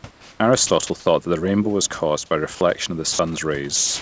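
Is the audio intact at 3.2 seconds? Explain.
No. From 3.13 to 3.19 s, a 60 ms stretch of speech is gone and a soft, steady hiss sits in its place before the speech returns. This points to sound dropped by the voice detector. The sender's voice activity detection likely judged that quiet moment to be background and stopped transmitting. The receiving end then filled the gap with comfort noise and resumed normal playback once the detector opened again.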